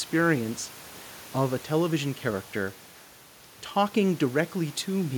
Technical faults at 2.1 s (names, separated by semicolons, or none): none